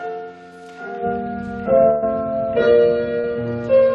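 The audio has two packet-loss faults in a network call path. From 1.89 to 2.04 s there is a burst of packet loss. About 120 ms of audio never arrived, and the receiver bridged the hole for roughly 130 ms by extending the last received sound and fading it down. Playback then resumes further on, with that stretch gone. At 3.20 to 3.25 s a short concealed packet loss removes about 40 ms. The decoder synthesises around 30 ms of continuation and crossfades back into real audio, producing a brief smear where the dropped fragment should be.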